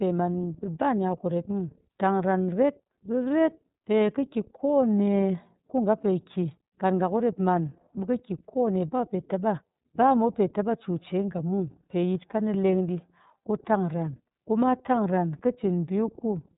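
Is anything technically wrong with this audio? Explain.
Yes, the whole speech clip has been through the iLBC codec. It's cut off above about 3.8 kHz, so it sounds narrowband and muffled, and because each frame's excitation is coded on its own, the speech comes out plainly rough and synthetic, which fits the 30 ms mode.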